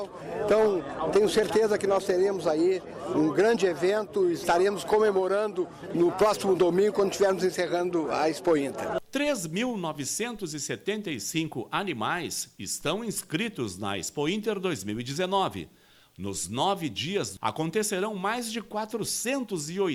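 No technical faults are audible.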